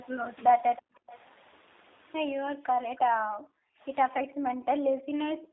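G.729 codec damage runs throughout: the speech is squeezed into a 300 Hz to 3.7 kHz line band and rebuilt from a vocal tract model, which fits an 8 kbit/s G.729A coder. It sounds plainly rough and synthetic.

Speech suppressed in double talk, from 0.81 to 1.1 s: the speech sinks very deeply, almost to silence. This is likely an echo canceller turning down its own talker while both sides spoke at once.

Echo leak, from 1.12 to 1.19 s: a faint, brief copy of the speech returns about 320 ms late. The loudspeaker echo likely slipped past the canceller and was sent back.

Speech suppressed in double talk again, from 2.51 to 3.83 s: the speech drops very deeply for well over a second. The suppressor is again likely mistaking overlapping talk for echo.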